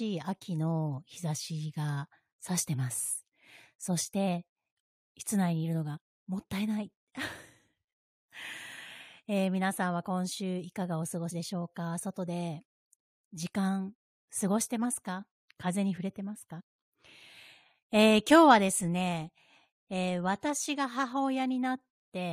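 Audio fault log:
5.96–5.98, 11.30 and 16.59–16.61: compressed frames skipped. At each point the speech jumps forward, losing about 20, 70 and 50 ms. The gaps fit whole frames of roughly 23 ms going missing.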